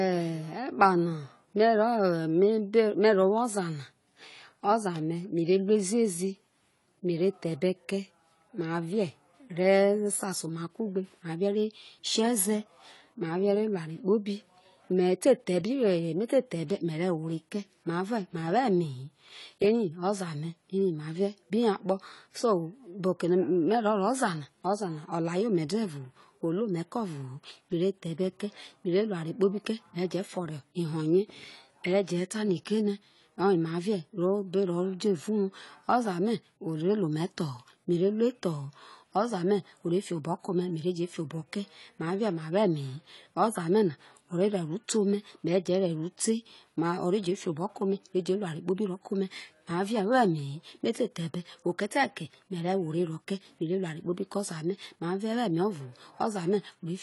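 Speech, and the whole thing sounds dull and smeared, with nothing above 11.5 kHz and an obvious fizzy, warbling edge on sibilants. That's likely AAC compression, an AAC-LC encode starved of bits, which fits something around 32 kbps.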